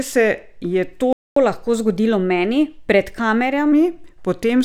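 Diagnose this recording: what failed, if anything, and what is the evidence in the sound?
A playback stall at 1.13 s cuts the speech off mid-flow, leaving about 0.24 s of silence until 1.36 s. This points to the playback stage, most likely the player's buffer running dry or its output thread being blocked, so nothing reached the output until it recovered.

Catch-up at higher speed follows from 1.36 s to 3.72 s. The speech runs at 1.1 times normal speed, with pitch raised by roughly a semitone and a half, then settles back. The player is resampling its backlog faster to recover the time lost in the stall.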